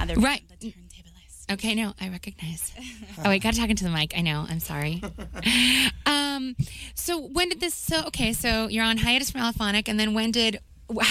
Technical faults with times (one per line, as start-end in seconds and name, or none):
2.84 dropped samples